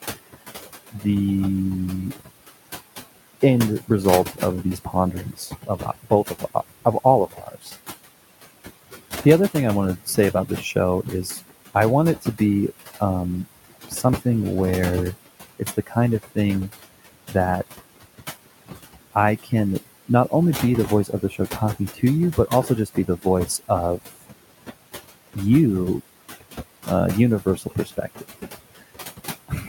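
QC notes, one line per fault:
Throughout: overdone noise removal. The suppressor is set far too strong, so bands near its noise estimate are pulled almost to nothing. Gaps fall to near silence with twinkling specks.
Throughout: noise suppressor artifacts. Bands judged to be steady noise are lowered frame by frame, by about 16 dB, so the room noise, normally about 15 dB under the speech, sinks between phrases and swells back beneath them.
0.04–1.04 s, 2.15–14.22 s, 15.26–25.37 s, 26.4–29.69 s: speech cut by the noise suppressor. Here the suppressor mistakes quiet parts of the speech for noise, dropping them by about 18 to 19 dB. Soft consonants and word endings sound swallowed or faint, in total about a fifth of a second in the first range and roughly two seconds in each of the next two. Unlike the steady thinning, these are momentary losses of speech itself.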